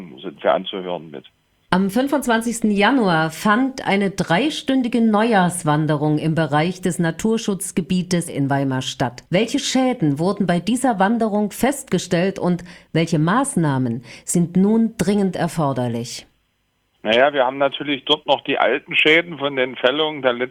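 The audio jumps abruptly forward at 8.27 s, with no gap or fill, and about a second of material simply disappears. This skip ahead happens when a chunk of audio is discarded, in transit or by an overflowing jitter buffer, while later audio is already queued. Shortly after, from 9.04 to 9.84 s and again from 10.26 to 11.10 s, the sound runs noticeably hurried at unchanged pitch, about 6% and then 8% fast. This is jitter buffer speed-up: after a backlog built up, the receiver repeatedly trimmed tiny pitch-period slices, removing a few tens of milliseconds in each stretch, to bring its delay back down.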